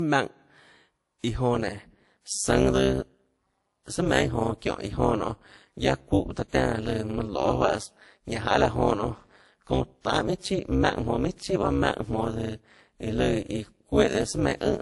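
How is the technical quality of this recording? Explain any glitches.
Technical quality is poor, with two faults audible.

Throughout, the speech sounds dull and smeared, with no content above about 11.3 kHz and two kinds of codec artefact layered together. This likely comes from transcoding between lossy codecs, an MP3 encode near 48 kbit/s re-encoded as WMA 1 near 64 kbit/s.

From 1.55 s to the end, a harsh, robotic buzz at around 200 Hz chops the level by about 60 dB. This is overlap-add ripple: frames were rejoined with windows that don't sum evenly, so gain dips once per frame.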